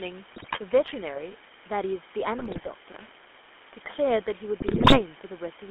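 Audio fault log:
Throughout: low bit depth with dither. The audio is held to a coarse amplitude grid, consistent with about 6 bits, and dither turns the rounding error into a constant, even hiss only about 15 dB below the speech. The noise stays the same however the level moves, with no grainy distortion.
Throughout: GSM full-rate codec. The speech is confined to a telephone band of 250 Hz to 3.4 kHz, and the damage from the codec is plainly audible. The vocal tract is modelled and driven by a sparse, regularly spaced pulse excitation, which gives a buzzy, gravelly roughness consistent with a 13 kbps full-rate stream.
0.32–0.59 s, 2.38–2.69 s, 4.58–5.02 s: GSM bit errors. Corrupted bits reach the decoder in short runs. Wrong filter, pitch and gain parameters bend the spectrum and throw the level around frame by frame, so the speech breaks into squawks, pops and gargling.
2.92–3.11 s: loose connector crackle. 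An intermittent contact rapidly makes and breaks the line for about 0.19 s, chopping the signal and adding pops from any DC present. This is heard as a short, irregular burst of scratchy crackle.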